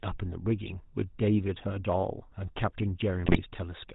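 From the start to the end of the clip, the speech carries the buzzy, gravelly roughness of the GSM full-rate codec. The coder rebuilds the voice from a vocal-tract filter driven by sparse, regularly spaced excitation pulses, so the voice sounds coarse and grainy. Nothing is left above 4 kHz. The damage is plainly audible, and the sound fits a 13 kbps GSM stream. Unlike narrowband filtering alone, this adds a rasping, pulsed texture, not just dullness.

Between 3.26 and 3.41 s the voice abruptly breaks into squawks, pops and gargling, which points to GSM bit errors. Corrupted bits reached the decoder and scrambled the filter, pitch and gain values, so several consecutive frames, about seven, came out with bent spectra and sudden level jumps. The damage fits an error rate of roughly 3 percent. A packet-loss dropout would go silent or repeat earlier sound. Here the decoder keeps producing sound, but it comes out garbled and harsh.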